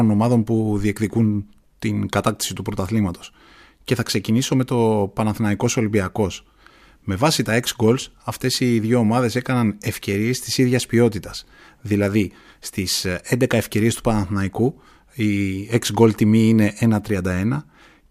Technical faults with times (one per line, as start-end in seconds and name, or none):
none